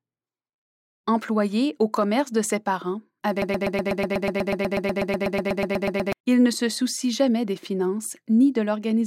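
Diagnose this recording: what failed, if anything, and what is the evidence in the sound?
A broken-record loop runs from 3.42 to 6.13 s: a 0.12 s fragment of speech repeats exactly, back to back, 22 times. On a spectrogram it shows as identical vertical blocks tiling at a regular period, and the waveform as a repeating pattern. The player, encoder or stream likely stalled and kept resending its last buffer, so the original audio there is lost.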